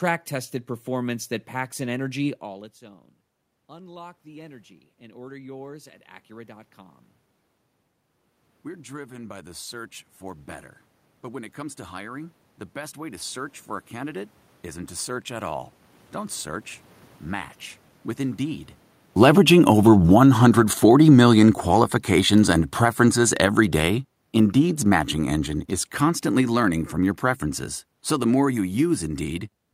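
The automatic gain control rose twice as the input dropped. After "that packs an energy", as the talker moves back, it climbs about 7 dB from 2.41 to 7.06 s, and again about 4 dB from 8.64 to 21.22 s, so voice and room noise swell together. Then the automatic gain falls about 16 dB from 19.07 to 29.0 s, after the talker moves near 19 s, and voice and background sink gradually.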